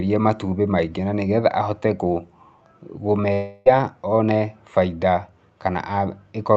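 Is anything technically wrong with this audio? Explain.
Yes. From 3.33 to 3.68 s, a likely long network dropout stopped packets arriving for about a third of a second, and the receiver stretched the last sound into a buzz or hiss that fades before normal audio resumed with that part missing.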